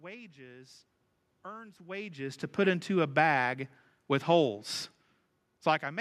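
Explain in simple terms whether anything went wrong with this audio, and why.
Nothing went wrong that I could hear: the background noise is just the room the recording was made in, and the voice getting quieter or louder around one and a half seconds in is simply the talker shifting position.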